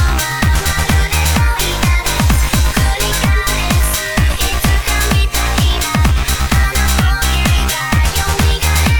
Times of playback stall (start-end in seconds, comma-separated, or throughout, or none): none